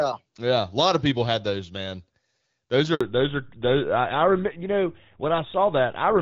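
It's a speech recording, and at 2.95 s there's a handover gap: the sound cuts off for about 60 ms, until 3.01 s, as the call jumps between networks and no speech frames make it across the switch, so whatever was said in that slice is simply gone. Right after, from 3.01 s to the end, there's a fallback to narrowband. Everything above 4 kHz disappears and the speech turns duller and a bit rougher. Before that, the HD Voice sound is clean, consistent with AMR-WB at around 12.65 kbit/s, and the switch appears to drop to an older codec like GSM full rate.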